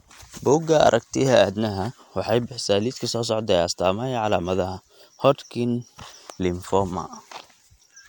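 No audible technical faults.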